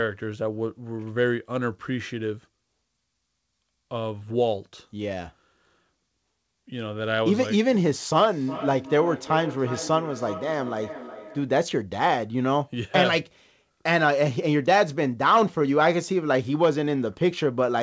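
Speech, carried over a call path whose band stops at 8 kHz, consistent with G.722 at 64 kbps. From 8.32 to 11.58 s, the speech comes round again roughly every 400 ms, peaking about 12 dB below the speech. This is feedback echo between two devices: one device replays another's microphone, and that microphone picks it up again.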